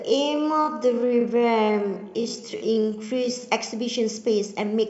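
Time-stretched section, 0.0 to 3.42 s: speech plays at 0.522 times pace with pitch held, sounding dragged, likely from software repeating short slices.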